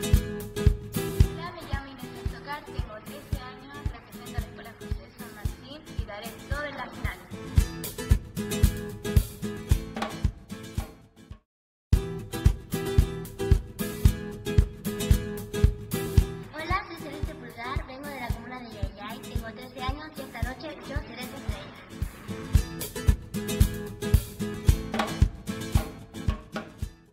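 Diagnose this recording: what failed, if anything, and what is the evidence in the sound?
Nothing failed in this recording, and the sound gives no evidence of any fault.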